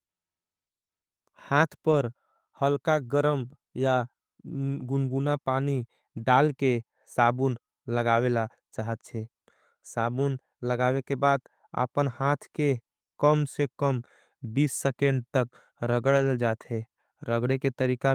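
Lost packets rebuilt from error correction occur at 1.91–1.93 s, 6.17–6.19 s and 16.17–16.23 s. The decoder fills each gap with the low-bitrate copy carried in the following packet, so nothing drops out, but those stretches sound rougher and noisier. The 40 ms of rebuilt audio points to two separate losses.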